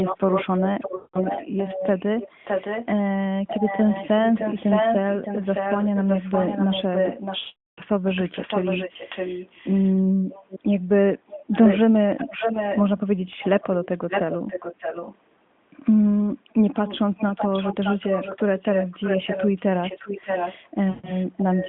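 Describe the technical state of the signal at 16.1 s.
At 16.1 s the audio is intact, with no fault at that moment.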